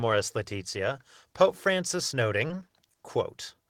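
At 2.47 to 2.51 s there's a short concealed packet loss: about 20 ms of audio arrived too late, so the decoder extrapolated a fill, leaving a quick smeared wobble.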